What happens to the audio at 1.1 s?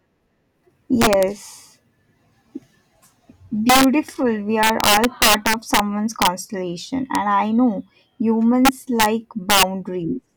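Around 1.1 s the speech hits integer overflow, from 1.02 to 1.23 s. The signal is driven about 4 dB past the largest value the integer format can hold, and instead of being held at that ceiling, each peak wraps around to the opposite extreme. The loudest moments therefore jump across the full range, producing violent, snapping cracks. Clipping would flatten those peaks into a duller buzz; here the sign flips make the damage far sharper.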